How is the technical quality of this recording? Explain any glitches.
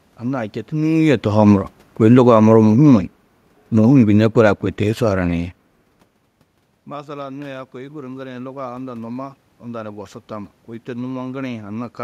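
The level is unsteady. Automatic gain control keeps changing the gain, and the room noise rises and falls with it.

Automatic gain falling runs from 0.72 to 3.09 s, then again from 3.74 to 5.45 s. The talker comes closer around half a second in, and the control responds by lowering its gain, by about 6 dB and then about 3 dB. Voice and background sink together.

Automatic gain rising runs from 6.87 to 11.98 s. Around 6 s the talker moves away and the input drops by about 18 dB. The control slowly raises its gain by about 6 dB, so voice and room noise swell together over several seconds.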